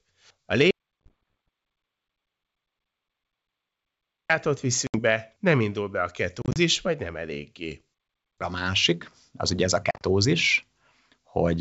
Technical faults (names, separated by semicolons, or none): audio dropout to silence; packet loss on an ADPCM call